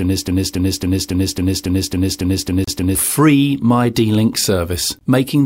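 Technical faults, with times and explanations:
0.00 to 2.95 s, broken-record loop: A stall in the player, encoder or stream most likely left it resending the last piece of audio it held, and this is already happening when the clip begins. A fragment of about 276 ms plays ten times back to back, identical each pass, giving a stuttering, mechanical repetition. Whatever should have sounded during these three seconds never arrives, so the audio jumps forward once the loop breaks.
2.64 to 2.68 s, Bluetooth stall: The sound drops to silence for 31 ms and then resumes. The likely cause is radio interference delaying packets to the headphones, so their small buffer emptied and playback halted until the resent data came in. It falls inside the repeating section, briefly interrupting the loop just before it ends.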